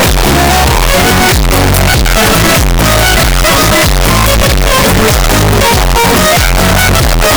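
Right through, it's very loud, harsh distortion with quiet stretches as loud as the rest, likely signed and unsigned mixed up, flipping every sample's top bit.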